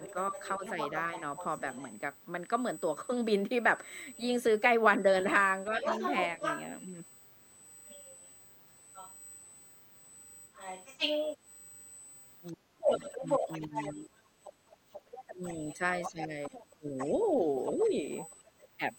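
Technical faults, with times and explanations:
Throughout: USB whine. A steady, fixed-pitch tone sits at 8 kHz, roughly 20 dB below the speech. This is likely current drawn by the USB bus in 125-microsecond microframes, leaking into the audio through the power or ground.
0.00–1.83 s and 4.15–18.66 s: other side's voice leaking through. A second voice can be heard behind the speaker. It is faint in the first stretch and only slightly below the main speech in the long second stretch. Likely the far end played on a loudspeaker and not fully removed by the echo canceller.
0.13–1.63 s, 5.70–6.42 s, 10.49–10.55 s and 12.53–18.05 s: speech suppressed in double talk. The speaker's level dips while the other voice is present. The drop is slight in the first two spans, clearer at 10.5 s, and deep and lasting in the final span, about three seconds in total. The echo canceller likely turned down both voices.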